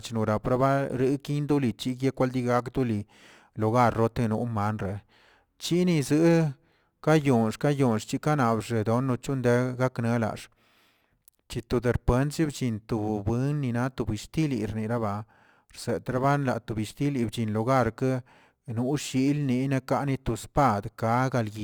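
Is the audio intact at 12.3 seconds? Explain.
No. At 12.3 seconds, as throughout the clip, the speech carries crude rate conversion. A 48 kHz to 44.1 kHz change was made by simply picking the nearest sample, with no filtering. That drops samples in a fixed repeating cycle, leaving an error roughly 30 dB below the speech that is heard as a gritty, inharmonic fizz riding on louder and brighter sounds. A spectrogram shows faint stray partials that ignore the harmonic stack, and the waveform has tiny periodic steps.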